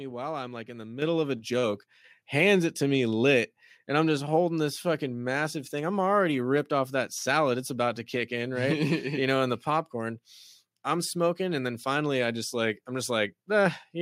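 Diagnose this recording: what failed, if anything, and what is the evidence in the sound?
The call software's automatic gain control raised the microphone's input volume in discrete steps. It stepped up by about 8 dB at 1.02 s and about 4 dB at 2.04 s, and each time the speech and background noise jump in level together at once.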